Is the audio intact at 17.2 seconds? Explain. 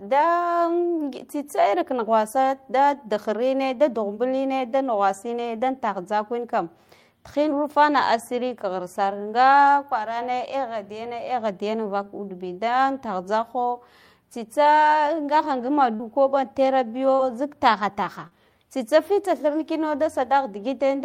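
No, not quite. Around 17.15 to 17.22 s there's a short concealed packet loss: roughly 40 ms of the speech didn't arrive in time, and the receiver papered over about 37 ms of it by extending the sound just before the gap, then crossfading back into the real signal. You hear it as a quick smear or wobble, and a brief consonant in that spot can simply drop out.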